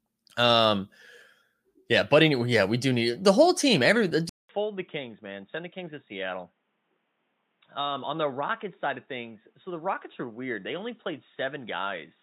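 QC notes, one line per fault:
4.29 s to end, input switched to a poorer device. After a 200 ms gap the speech turns dull and boxy, with nothing above 3.8 kHz. It drops roughly 10 dB in level, and a faint new background noise appears. The recording likely moved to a narrower-band microphone or headset.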